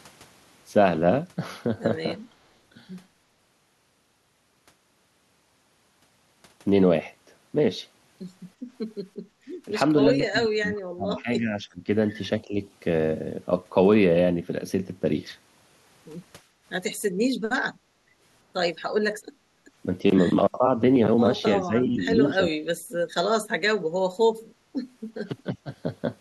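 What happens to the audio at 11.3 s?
At 11.3 s the speech is being pushed down in patches: between 9.65 and 12.57 s it repeatedly sinks, at its deepest by roughly 30 dB, so that about a second and a half of that stretch sounds nearly gated out. This is speech suppressed in double talk. The likely cause is an echo canceller that, faced with both ends talking at once, could not tell this talker from loudspeaker echo and attenuated everything.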